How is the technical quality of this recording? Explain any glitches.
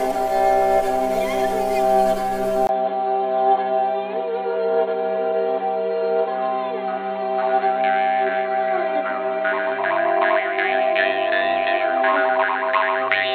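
Quality drops partway through. At 2.67 s there's a tiny gap, about 20 ms, and from there to the end the sound turns dull and boxy, with nothing above 4.2 kHz and a faint new background noise sitting well below the signal. The level barely changes. That combination likely means the input switched to a poorer device, something like a different mic or a headset's call profile with its narrower band and its own noise floor.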